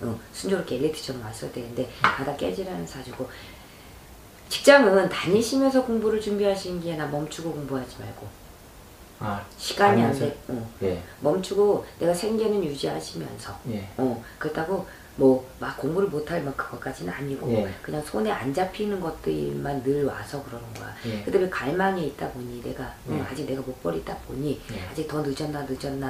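No technical faults can be heard anywhere in this audio. Nothing in the sound needs a timestamp or a fix.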